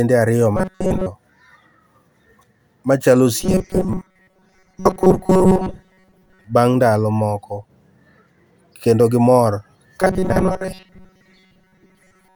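From 0.57 to 1.07 s, from 3.40 to 6.44 s (ending just before "bang' ndalo moko") and from 10.01 s, after "kendo gimor", to the end at 12.36 s, the speech takes on a robotic sound from repeated short buffers. It is a rigid, metallic buzz at 188 Hz that only loosely follows the words. The likely cause is audio arriving too seldom, so a segment of about 5.3 ms is looped over roughly 70% of the stretch while the real audio is skipped.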